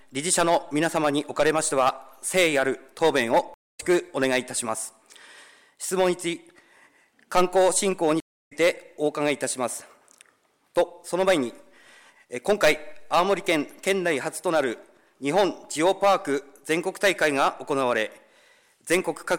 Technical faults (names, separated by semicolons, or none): stream reconnect